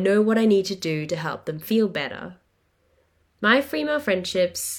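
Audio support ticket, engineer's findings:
No faults found in the speech recording. No component in the chain flagged for follow-up.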